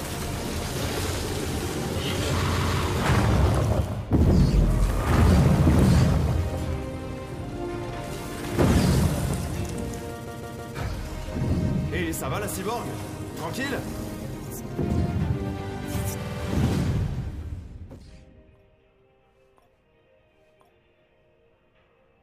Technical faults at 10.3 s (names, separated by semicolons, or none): repeated frames